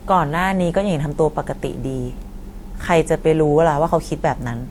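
A speech recording with one fault running through the whole clip. The sound carries two layers of coding damage at once. One set of codec artefacts sits on top of another, different set. This is most likely transcoding between lossy codecs. The pattern points to a WMA encode at around 96 kbit/s, later re-encoded as Opus at around 48 kbit/s. The second codec wasted bits reproducing the first one's errors and added its own. Nothing is present above 20.1 kHz.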